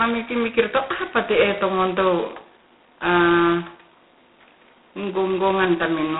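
Throughout the speech, G.726 ADPCM damage is heavy: a harsh, rasping hiss that rises and falls with the speech level, which fits 16 kbit/s coding. The 250 Hz to 3.6 kHz band, with nothing above 3.9 kHz, separates it from broadband noise.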